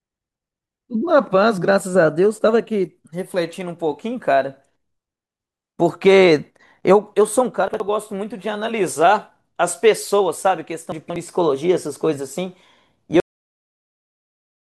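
At 7.68 s the speech briefly jumbles until 7.8 s. At 10.92 s a longer scramble runs to 11.16 s. Both are chunks out of order. The audio moves in 60 ms pieces. In the first case one piece arrives a single slot late and plays after its neighbour. In the second a piece is held back three slots, so the 0.24 s span plays shuffled. No sound is lost, but each displaced piece makes three hard joins.

At 13.2 s the speech stops abruptly, mid-sound, and falls straight to dead digital silence with no natural decay. This is a cut-off end. The final buffers were never written or played, so the last stretch of the clip, about 1.5 s, holds nothing.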